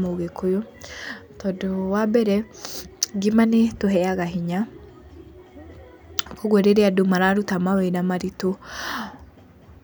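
No technical faults can be heard anywhere in this speech recording. There is no event here that calls for a time mark.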